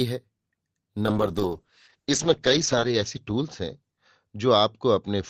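From 1.03 s to the end, a call bitrate drop takes hold. The encoder's rate falls from 48 kbps to 8 kbps and stays at its lowest for 1.83 s. Starved of bits, Opus codes the speech coarsely and narrows its band from 20 kHz to 8 kHz, so the voice turns muffled and rough, with a watery edge. On a spectrogram, energy above 8 kHz cuts off, leaving a flat ceiling over smeared, blocky harmonics.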